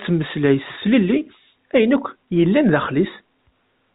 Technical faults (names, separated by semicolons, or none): none